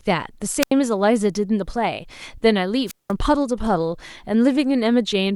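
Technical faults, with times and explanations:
0.61 to 0.71 s, wireless microphone squelch dropout: the radio link fades, hiss rises, then the receiver's squelch mutes the speech for 82 ms before it returns.
2.86 to 3.12 s, wireless microphone squelch dropout: a weaker signal brings static, then the squelch leaves a near-silent gap of 189 ms until the link recovers.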